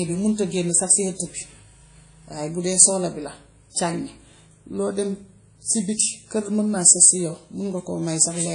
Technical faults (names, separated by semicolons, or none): WMA compression